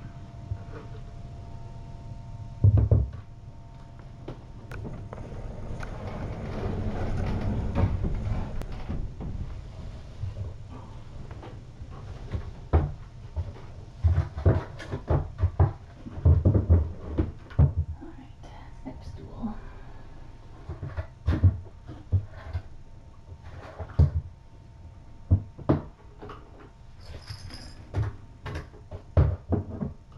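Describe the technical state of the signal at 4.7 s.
At 4.72 s the audio shows compressed frames skipped. The sound jumps forward by roughly a tenth of a second, which fits a single lost frame of 92.9 ms. That frame was either missing from the stream or rejected by the decoder as corrupt, so playback resumes at the next frame. The join is a sudden discontinuity in the material.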